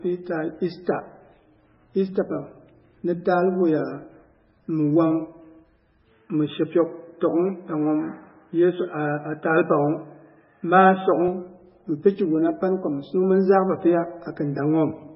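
Right from the start the whole speech track has a hard ceiling at 5.5 kHz and a watery, swirly texture, which points to heavy MP3 compression, likely at a very low bitrate around 16 kbps. The encoder starved for bits, chopping the treble and letting weak frequency lines flicker on and off between frames.

Then at 6.11 s the sound goes duller and boxier with no gap, the band narrowing to nothing above 3.6 kHz and a faint new noise floor sitting well below the speech, while the level stays about the same. That's an input switched to a poorer device, likely, and it lasts until 11.28 s, when the clearer sound returns.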